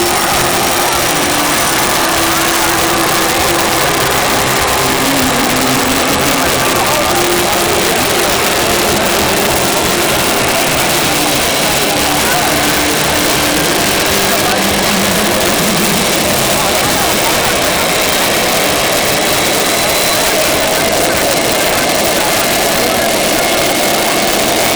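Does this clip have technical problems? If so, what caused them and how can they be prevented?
Yes. Integer overflow runs throughout. The signal is pushed about 4 dB past full scale, and each loud peak wraps to the opposite sign, producing harsh cracks. Prevent it by saturating or limiting the sum and gain stages instead of letting them wrap.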